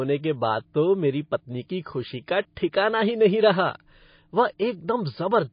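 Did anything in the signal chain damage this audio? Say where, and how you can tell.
Yes: the codec stage, likely MP3 compression at a very low bitrate, such as 24 kbps. Throughout, the speech is cut off above 5.1 kHz and sounds plainly watery and swirly.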